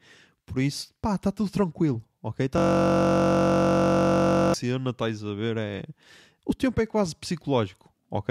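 From 2.58 to 4.54 s, just before "estás a ver", a system hang loop replays one 21.33 ms slice, which fits a 1024-sample buffer, as a steady 46.9 Hz buzz. Unlike a dropout or varying stutter, each repeat is identical and perfectly periodic.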